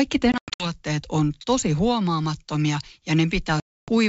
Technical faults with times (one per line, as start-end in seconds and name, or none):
0.32-0.68 packet loss on an ADPCM call
3.60-3.92 packet loss on an ADPCM call